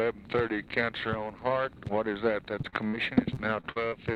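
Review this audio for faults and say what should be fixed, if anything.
Repeated packet loss (robotic sound) runs from 2.61 to 3.94 s. Eight short holes appear, the longest 47 ms. Each is patched by extending the previous sound, covering about 19% of that stretch. The result is choppy, with pieces missing. Prevent it with a steadier network path and a larger jitter buffer.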